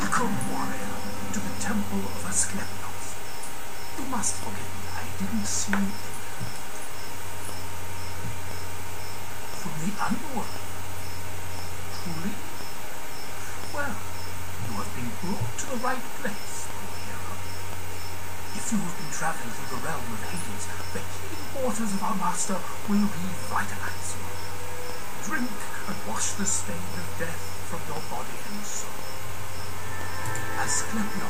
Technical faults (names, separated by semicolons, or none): periodic USB or driver dropouts